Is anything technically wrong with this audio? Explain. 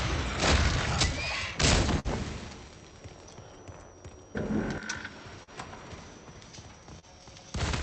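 Yes. The audio passed through a call codec whose top end stops near 8 kHz, consistent with Opus at 64 kbps, and it shows three dropouts from late or lost packets.

A burst of packet loss runs from 1.99 to 2.07 s. The receiver stretches the last sound for about 51 ms and lets it die away, then resumes about 40 ms further on, so a piece of the audio is skipped. Unlike the shorter events, it is a held, fading patch followed by a jump.

Short concealed packet loss occurs at 5.43 to 5.50 s and at 6.99 to 7.05 s. Each time roughly 40 ms never arrived, and the decoder bridged it with about 40 ms and 33 ms of extrapolated sound before blending back, heard as a brief smear or wobble rather than an audible fade.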